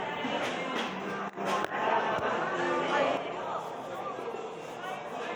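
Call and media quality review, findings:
Level drop at 3.17 s, holding to the end of the clip. Abrupt fall of about 6 dB in the shared content. Anything carried only on one side vanishes. No recovery. Likely cause: one channel drops out upstream of a mono downmix. The sum loses half its common-signal contribution, giving the 6 dB step, and that side's unique content goes entirely.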